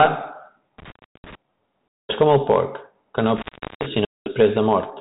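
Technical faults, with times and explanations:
0.78–1.35 s and 3.37–3.86 s (the second just after "el porc que no"), intermittent contact: the speech drops out for about 340 ms and then about 390 ms as a loose plug or cable connection opens and recloses. Each break has crackle at its edges and only faint hiss inside. The waveform shows a near-flat stretch bounded by sharp spikes. A spectrogram shows a pale gap flanked by thin vertical broadband streaks.
1.98–2.16 s (just before "com el porc que") and 4.05–4.33 s, packet loss on an ADPCM call: about 210 ms of audio is lost each time and replaced by silence, a gap length that fits roughly twenty short packets. The adaptive predictor and step size lose step with the sender, so the speech resumes with brief, slight distortion that settles within tens of milliseconds. The waveform shows a clean, square-edged hole. A spectrogram shows a blank band cut straight across the sub-4 kHz telephone band, with a smeared onset afterwards.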